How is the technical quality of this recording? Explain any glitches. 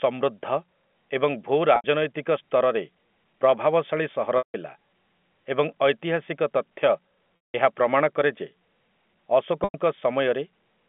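The speech has four short packet-loss dropouts over telephone-band G.711 coding limited to 200 Hz–3.4 kHz. Packet loss with pitch repetition occurs at 1.76–1.84 s (after "ଏବଂ ଭୂ"), 4.38–4.54 s (after "ସ୍ତରରେ ପ୍ରଭାବଶାଳୀ ସହର"), 7.49–7.54 s (before "ଏହା ପ୍ରମାଣ କରେ ଯେ") and 9.64–9.74 s. The receiver bridged each gap by looping the last pitch period, which sounds like a brief buzzy hold that fades out.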